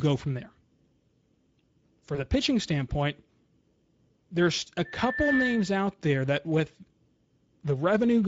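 Speex codec, throughout: the audio has a hoarse, noisy coarseness typical of this CELP coder, consistent with about 16.8 kbps, where too few bits describe the excitation.

VoIP packet loss concealed by the speech codec, 2.15 to 2.24 s, just before "pitching standpoint": the decoder filled a gap that points to one lost 20 ms frame by extending its last pitch and filter. This leaves a brief fading smear that lingers past the gap.

Loudspeaker feedback squeal, 4.85 to 5.83 s, between "there's a" and "there that with": a 1.8 kHz tone swells over about half a second to roughly the level of the speech. The microphone was picking up its own loudspeaker, with loop gain above one at that frequency.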